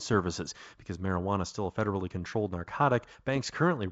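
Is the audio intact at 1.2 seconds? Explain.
Yes, at 1.2 seconds the speech comes through intact, carried by G.722 wideband telephone coding at 64 kbit/s with no break or disturbance at that moment.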